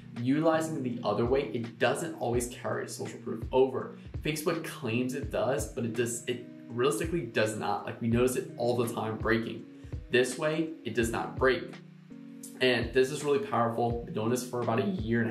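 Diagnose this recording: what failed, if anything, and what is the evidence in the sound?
Three evenly spaced ticks between 10.02 and 10.53 s, each a sub-millisecond blip, mark CD scratch ticks at the disc playback stage. A blemish defeats the error correction once per disc revolution, and the player interpolates or mutes the unrecoverable samples, leaving these brief clicks.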